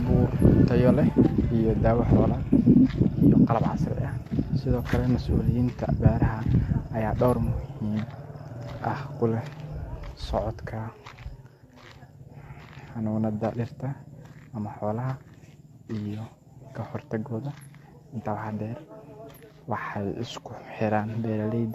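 Speech, likely re-encoded about three times with AAC, consistent with 64 kbit/s: the generation loss sounds swirly and hollow, attacks blur, and nothing sits above 14 kHz.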